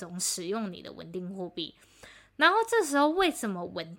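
Nothing technically wrong turns up in this short bit of speech; there's simply no fault to point to anywhere in it.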